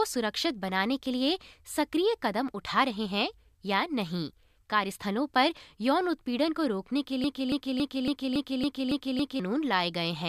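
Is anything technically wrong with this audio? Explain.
Yes. From 7.24 to 9.40 s, a broken-record loop repeats a 279 ms fragment of speech eight times, back to back. The stream likely stalled and resent its last fragment, losing the speech meant for that span.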